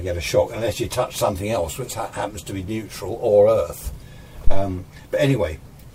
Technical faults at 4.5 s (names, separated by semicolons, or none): phantom power thump